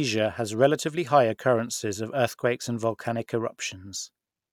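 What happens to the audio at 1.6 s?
Nothing goes wrong at 1.6 s; the speech runs on intact through that moment with no dropout, click or distortion.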